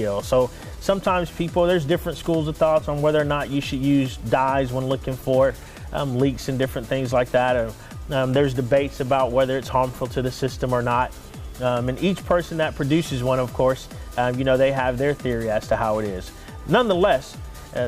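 Nothing in this audio calls for comment, since no technical faults turn up anywhere in it.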